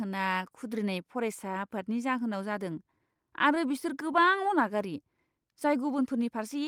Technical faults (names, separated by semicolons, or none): scattered short gaps